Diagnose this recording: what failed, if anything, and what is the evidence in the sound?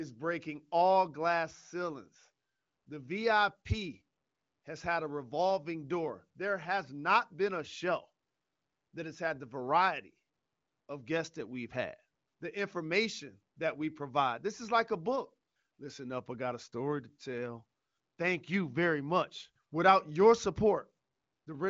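Nothing failed; no fault is audible in this recording.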